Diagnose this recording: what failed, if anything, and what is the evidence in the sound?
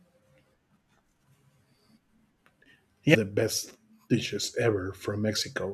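Stream segment skipped, at 3.14 s: the speech jumps abruptly forward with a brief blip. This is a network and playback failure, likely from a segment of the stream failing to load, so the player discarded it and carried straight on with the next one.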